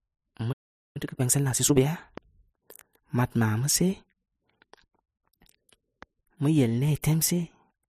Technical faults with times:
0.52-0.97 playback stall
0.97-1.81 time-compressed catch-up

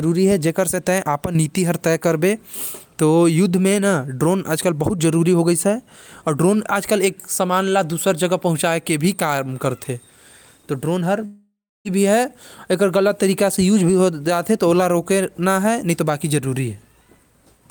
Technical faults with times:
11.25-11.87 long network dropout

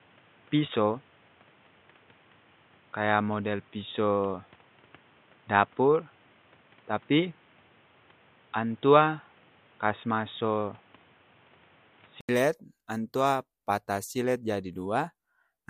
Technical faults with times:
0.00-12.29 input switched to a poorer device

